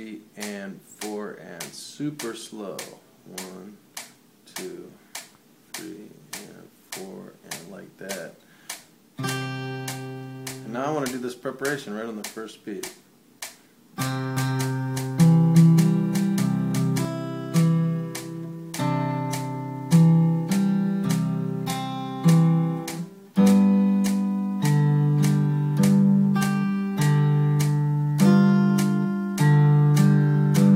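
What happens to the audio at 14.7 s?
At 14.7 s the sound is a doubled audio track, running from 14.37 s to 17.05 s. A second, full-band copy of the same audio trails the original by roughly 0.4 s at about the same loudness, most likely because the signal was captured again through a slower path. Unlike an echo or room reverb, the copy neither fades nor repeats, carries no room colour, and switches on and off abruptly at the span's edges.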